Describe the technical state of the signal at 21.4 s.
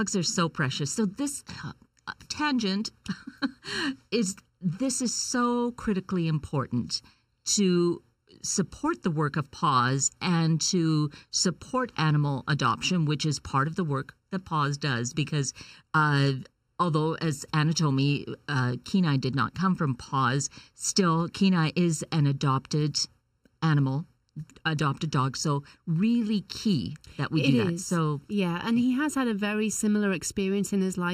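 At 21.4 s, as throughout the clip, one channel runs late by about 0.7 ms before the two are summed to mono, causing channel delay (comb filtering). Cancellation carves fixed, evenly spaced notches, the first near 700 Hz, leaving the speech hollow and phasey.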